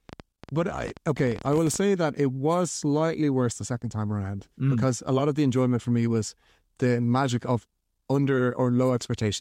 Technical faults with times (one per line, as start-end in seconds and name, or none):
0.09-1.77 train of clicks